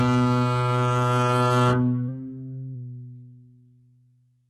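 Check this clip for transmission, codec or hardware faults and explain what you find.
One fault runs through the whole music clip: low-bitrate audio saved at a high bitrate. Nothing reaches above 11.8 kHz, and the artefacts of the first encoding are still present. The likely cause is a very low-bitrate first encode, consistent with HE-AAC at around 16 kbit/s, later re-saved as a high-rate MP3 near 256 kbit/s. The second encode is generous but cannot restore what the first discarded, so the cut-off and artefacts remain.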